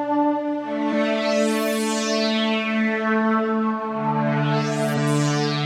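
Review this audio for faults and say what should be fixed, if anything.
Damaged data in a compressed stream: corrupted bytes made the decoder misread frames, lose sync and hunt for the next header, producing brief disruptions at 0.89–0.91 s and 4.93–4.99 s. Protecting the stream with checksums and error-resilient transport would prevent this.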